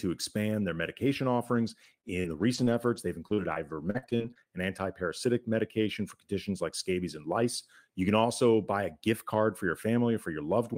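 Speech, with repeated packet loss (robotic sound) from 1.49 to 4.49 s, just after "expand their medication". Gaps up to 40 ms keep recurring. Each is patched by stretching the preceding sound, so about 11 percent of the stretch turns choppy.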